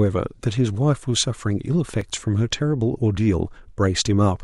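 A tiny skip at about 2.01 s marks an overlap between stream segments: at the 2-second segment boundary, timestamps overlapped and roughly 16 ms of real speech was trimmed away.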